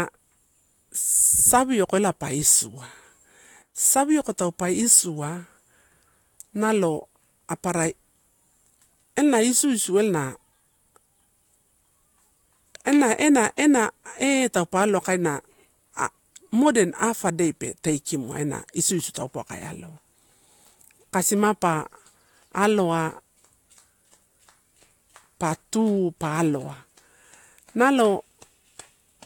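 A speech recording with one sudden gain jump, running from 3.62 s to 3.75 s. For about 0.13 s the level drops by about 8 dB without any fade in or out: the speech and the background noise fall together at the same instant, then return just as abruptly. The likely cause is a digital gain setting or bit shift applied between one sample and the next with no ramp.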